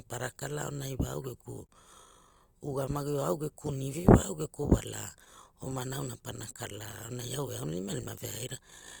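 Throughout the recording, the sender's clock runs slow relative to the receiver's, by roughly 3 percent. This is clock drift between sender and receiver. The receiver's jitter buffer keeps draining, so it must keep stretching the speech to avoid running dry, which leaves the pacing faintly uneven from start to finish.

From 0.34 s to 7.71 s, the receiver makes repeated timing corrections to compensate. It plays the speech at about 98 percent speed, adding around 150 ms in total through small, unevenly spaced repeats. These come across as slight hiccups and a gently wavering tempo rather than any clear break.

At 1.67 to 1.71 s, a short stall from a late packet occurs. The buffer ran empty, so the receiver held the last sound for 22 ms until the packet turned up, then carried on. Nothing is lost, but one sound lingers a touch long with a slight buzz or dip.

Between 6.36 s and 7.09 s come scattered short gaps, about three of them. 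Each was patched by continuing the preceding sound, covering roughly 30 ms altogether, the longest around 10 ms. They are heard as tiny ticks or smears in otherwise continuous speech.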